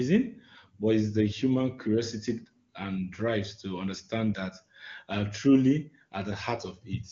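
No technical faults can be heard in this speech clip, which passes through the AMR wideband (HD Voice) codec.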